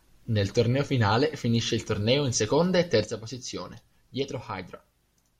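A sudden gain jump occurs at 3.04 s, just after "torneo in seconda e", and lasts to the end of the clip. From that sample onward the speech and the background noise fall together by about 7 dB, with no fade between the two levels. The likely cause is a digital gain setting changed instantly rather than ramped, so the whole signal steps down at once and stays at the lower level.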